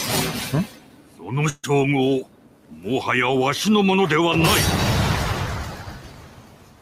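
A noise suppressor tuned for speech has been left running on this audio throughout. It treats sustained tones, ambience and decays as noise, so the level swings by around 10 dB as it engages and releases, and held material pumps and thins while transients pass. The same process causes distinct cuts where the sound is taken for noise. Between 0.66 and 1.33 s, between 2.21 and 2.86 s, and from 5.65 s to the end, sustained and decaying content sinks by up to about 11 dB and tails are truncated. A burst of packet loss runs from 1.49 to 1.65 s. For about 139 ms the receiver extends the last received audio while fading it, with roughly 20 ms of silence. Playback then resumes about 140 ms further on, so that stretch of the original is missing.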